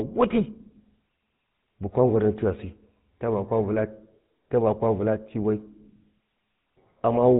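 Throughout, the speech carries GSM full-rate codec damage, plainly audible as a buzzy, gravelly roughness. The sparse pulse-driven excitation, consistent with the 13 kbps full-rate coder, leaves a spectrogram empty above 4 kHz and harmonics smeared into grainy texture.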